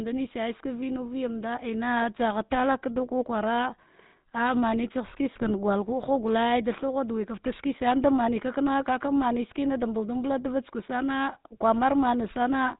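From the start the speech has a buzzy, gravelly roughness and nothing above 4 kHz, with plainly audible damage. This is the GSM full-rate codec, which fits a 13 kbps stream: it models the vocal tract, drives it with regularly spaced pulses, and keeps only every third excitation sample. From 5.35 to 5.51 s the voice breaks into squawks, pops and gargling. These are GSM bit errors, where flipped bits corrupted the decoder's filter, pitch and gain values across several consecutive frames. That bent the spectrum and threw the level off frame by frame.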